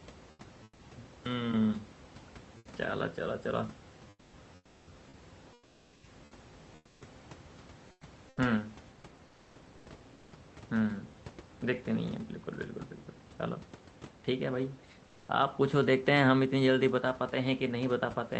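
Comfort noise in place of the background appears in the speech pauses at 0.31–0.79, 2.57–2.65, 4.09–4.87, 5.53–6.03, 6.75–7.01, 7.91–8.37, 9.27–10.31 and 15.07–15.27 s. The room noise gives way to a smooth, featureless hiss, at times about 6 to 7 dB quieter, which is likely Opus discontinuous transmission. Unlike a dropout or noise gate, the pauses never go silent: a synthetic bed of noise fills part of each pause instead.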